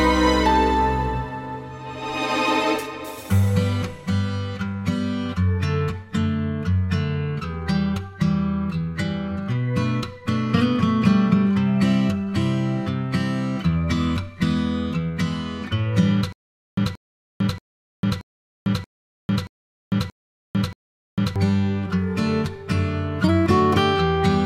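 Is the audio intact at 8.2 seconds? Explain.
Yes, at 8.2 seconds the audio plays through intact, with no dropout, glitch or other fault to be heard at that point.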